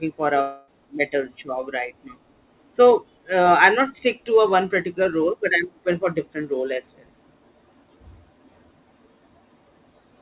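From 0.41 to 0.71 s, a long network dropout likely interrupted the incoming stream, and about 270 ms of speech was lost. The receiver filled the gap by stretching the last sound into a fading buzz or hiss with no silence. Speech then resumes without the missing stretch.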